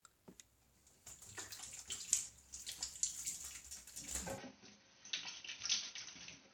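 At 4.38 s the system likely switched its input to a poorer device, one that passes nothing above about 6.2 kHz and brings its own noise floor. From there to the end, the sound abruptly loses its top end and turns duller and boxy, with no gap at the switch and little change in loudness. A faint new background noise sits well beneath the signal.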